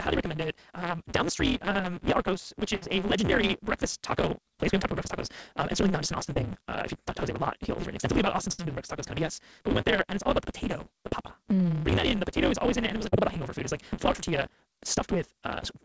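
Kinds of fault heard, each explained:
Block size mismatch (truncated): The tail of every block is discarded, which fits a 256-sample read. The speech races along about 1.88 times too fast at roughly normal pitch, with a steady 172 Hz buzz. A plain speed-up would raise the pitch instead.
Burst of packet loss: Around 2.76 s and 8.52 s, about 60 ms of audio goes missing. It is replaced by 55 to 63 ms of continued sound that holds as a buzz or fades as hiss, then the speech jumps ahead. These are longer than the short losses.
Short concealed packet loss: At 6.34, 11.09, 13.09 and 14.16 s, 20 to 40 ms drops out and is patched with 10 to 32 ms of extrapolated sound. Each is heard as a brief smear or wobble rather than a held buzz and a jump.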